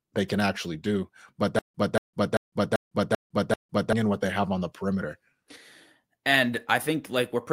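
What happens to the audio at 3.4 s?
At 3.4 s the speech is caught in a stutter with silent gaps (1.59 to 3.93 s). A 234 ms fragment repeats six times, each followed by 156 ms of digital silence, likely a stalled stream replaying its last buffer. A spectrogram shows identical blocks between blank columns.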